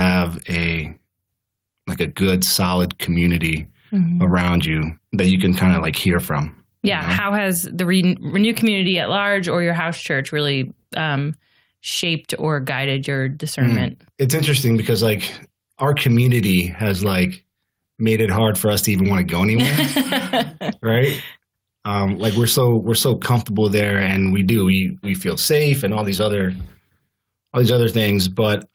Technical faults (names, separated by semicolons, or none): gain pumping